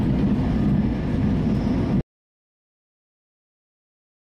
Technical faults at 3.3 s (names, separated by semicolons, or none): audio dropout to silence